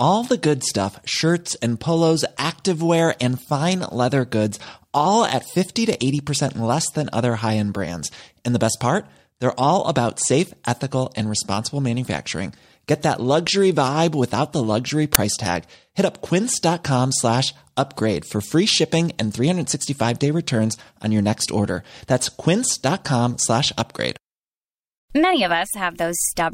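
File tags played as audio at 15.15 s interrupt this speech recording with a very brief, hard-edged burst of very loud white noise. An embedded cover picture's compressed bytes were read out as if they were audio samples, and their random-looking values decode as loud static.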